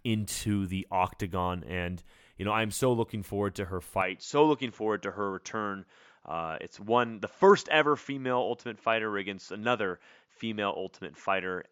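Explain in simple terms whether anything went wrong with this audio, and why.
Something does go wrong, at 4.02 s, right after "looking forward to her." From there to the end, the sound turns duller and a little quieter, with nothing above about 7.3 kHz, so the crisp top end of the speech is gone. A faint new background hiss comes in, and there is no gap at the change. This is most likely an input switched to a poorer device, meaning the recording jumped to a lower-quality microphone partway through.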